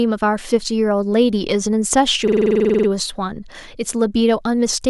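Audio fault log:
2.28–2.88 s, system hang loop: the system stalled while the sound hardware kept replaying its ring buffer, so one 46 ms slice of the speech repeats exactly 13 times. The result is a machine-gun stutter at 21.5 Hz, which fits a 2048-sample buffer. Packet-loss concealment fades or varies its repeats, but here every cycle is identical and at full level, and the speech resumes afterward with virtually nothing skipped.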